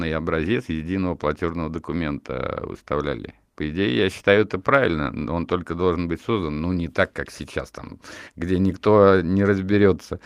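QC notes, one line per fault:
No faults found on the speech track.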